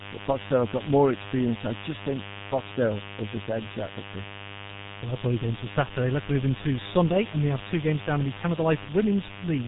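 Mains buzz runs through the whole clip, from the first second to the last. Sharp switching spikes, of the kind a dimmer, rectifier or poorly shielded cable lets in, arrive twice per cycle of the 50 Hz supply. Their harmonics reach well up into the kilohertz range. The result is a steady, raspy buzz sitting roughly 15 dB below the speech.

G.723.1 codec damage is also present throughout, and it is heavy. The speech passed through this low-rate telephony coder, and its character fits a bitrate of around 6 kbit/s. Nothing above 3.8 kHz survives, so the voice sounds muffled and boxed-in. The coder works in coarse frames and updates its model of the voice slowly, which leaves the speech hoarse and smears consonants into soft, indistinct blurs.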